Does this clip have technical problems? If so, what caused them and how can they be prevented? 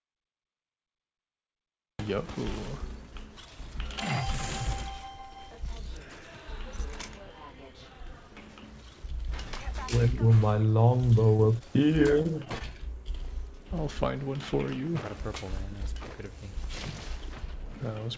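Yes. Cut-off start, 0 to 1.99 s: capture began late, so the sound opens abruptly out of digital silence mid-sound, with no natural attack. Start recording a moment before the source begins.

Short concealed packet loss, 11.37 to 11.41 s and 12.58 to 12.62 s: about 20 ms of data never arrived, so the receiver extrapolated the preceding sound, leaving a brief smear. Improve network reliability or enable forward error correction.

Short stall from a late packet, 11.59 to 11.62 s and 12.22 to 12.27 s: packets arrived 16 and 25 ms late, so the jitter buffer held the sound slightly too long before resuming. Use a steadier connection or a larger jitter buffer.

The G.722 call path leaves nothing above 8 kHz.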